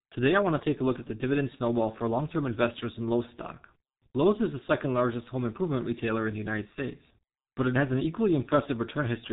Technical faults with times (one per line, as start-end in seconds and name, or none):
0.00-9.32 G.723.1 codec